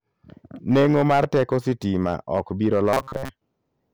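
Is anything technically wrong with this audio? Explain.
Yes, two faults are audible. Hard clipping runs through the whole speech clip. The signal is driven about 8 dB past what the chain can carry, so a small share of peaks are sliced flat. The flat tops add high harmonics, heard as crackle on loud syllables. Unlike codec distortion, it follows level, not pitch or timing.

From 2.93 to 3.31 s the voice turns into a rigid, metallic buzz at 134 Hz. This is robotic sound from repeated short buffers. The likely cause is a stalled stream being padded by looping the last fragment, roughly 7.5 ms long, across most of that stretch. A dropout would leave silence, but here a fixed buzz is imposed while the syllables stay roughly traceable.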